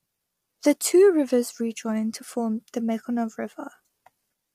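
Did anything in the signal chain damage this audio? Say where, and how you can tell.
Yes: throughout, the codec stage likely applied low-delay AAC compression, whose short frames resolve pitch harmonics poorly, leaving the speech rough and grainy, consistent with roughly 32 kbps.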